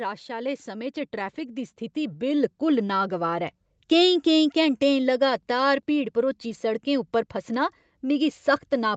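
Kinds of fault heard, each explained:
Automatic gain rising: the speech and background swell together by about 11 dB over three seconds, as gain control gradually lifts an input it judged too quiet.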